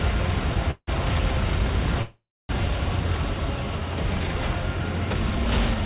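Call audio with an upper edge near 4 kHz, which fits G.711 A-law at 64 kbps. It has two call audio freezes, at 0.71 to 0.89 s and 2.01 to 2.51 s. The sound stalls into a fading buzz, then silence, and resumes where it left off. A likely cause is delayed packets emptying the jitter buffer.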